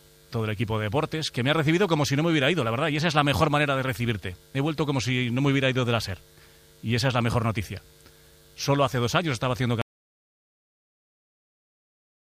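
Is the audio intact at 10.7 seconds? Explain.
No. At 10.7 seconds you're inside an audio dropout to silence that starts at 9.82 s and runs right to the end of the clip. The sound cuts off mid-flow and what's left is dead silence, not even room tone underneath. That points to the input going away, likely a lost connection or an accidental mute, while the recorder kept writing silence, so anything after 9.82 s simply isn't there.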